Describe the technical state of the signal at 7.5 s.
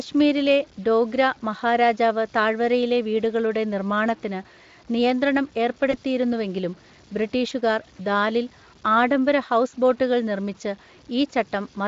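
Between 7.49 and 7.53 s there is VoIP packet loss concealed by the speech codec. One lost frame, about 20 ms, was filled by extrapolating the previous pitch and spectral shape at falling gain. It is heard as a brief buzzy tone or coloured noise that fades, just before "ദാലിൽ ആഡംബര ഹൗസ് ബോട്ടുകൾ".

Computer activity noise is also present: a buzzing pulse at roughly 150 Hz, around 40 dB below the signal, driven by machine load through the shared ground.

Grainy distortion, around 30 dB below the signal, also follows the level of the sound. This is likely low bit depth without dither, consistent with roughly 7-bit truncation.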